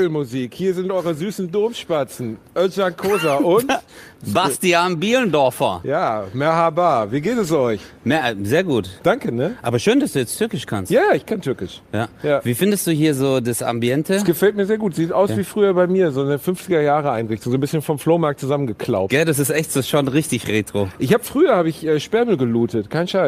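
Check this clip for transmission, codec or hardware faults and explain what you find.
No transmission, codec or hardware faults turn up anywhere in the clip; the signal stays stable and continuous throughout.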